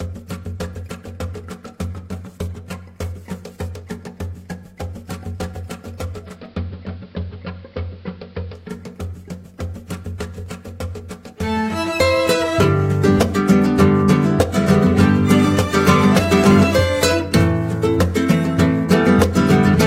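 At 6.17 s the sound does a digital radio blend to analogue: the receiver lost its digital stream and cross-faded, over about 0.3 s, to the station's AM broadcast. You hear the top end close down to that narrower AM band, with hiss sitting roughly 40 dB under the signal, while the overall level stays put. It lasts until 8.81 s, when the radio blends back to digital and the fuller treble returns.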